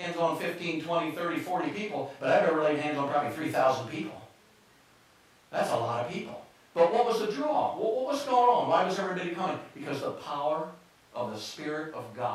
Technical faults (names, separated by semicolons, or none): none